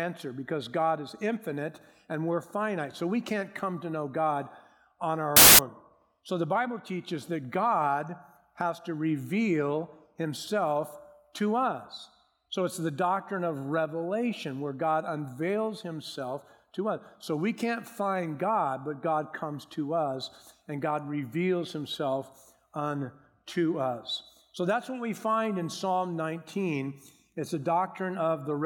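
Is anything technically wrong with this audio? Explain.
Yes. From 5.37 to 5.59 s the samples are built from the wrong bytes: the reader misaligns or swaps each sample's bytes, so rapidly changing low bits dominate. It sounds like a burst of loud, harsh broadband noise, shown as a dense waveform block and broadband spectrogram smear.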